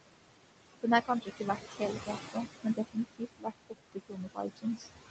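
Noise suppressor artifacts run through the whole clip. The suppressor pulls the room noise, which sits only about 9 dB below the speech, down by about 20 dB in the gaps, then lets it back up under each phrase. The result is a background that pumps with the speech. A steady noise gate would open and close as a whole. Here the noise changes colour as individual bands are cut, which marks it as spectral suppression.

Speech cut by the noise suppressor follows in three stretches: 1.05 to 2.47 s, 2.63 to 3.74 s, and 3.92 to 4.88 s. The low-level parts of the speech are treated as noise and turned down with it, by about 17, 22 and 20 dB at their deepest. In each stretch, roughly half a second in total is affected. Quiet consonants and word tails sound swallowed rather than missing. Packet loss would leave abrupt gaps or a robotic fill, but these dips follow the speech's own level and fade smoothly, which separates the suppressor's cuts from transmission dropouts.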